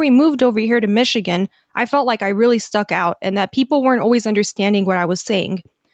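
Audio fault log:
throughout, gain pumping: the gain swings by roughly 5 dB, pulled down under each loud sound, likely from excessive input gain driving a fast limiter.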